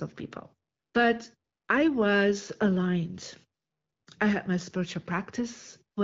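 Speech carried over AMR wideband (HD Voice) at 12.65 kbit/s, with only the light coding character expected at that rate and no technical faults to report.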